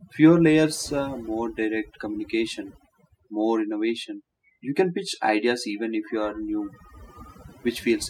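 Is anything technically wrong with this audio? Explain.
Yes. Throughout the speech there is overdone noise removal: a noise reducer set too aggressively cuts individual frequency bands whenever they sit near its noise estimate, taking quiet speech detail with them. Pauses drop in level and break up into twinkling specks.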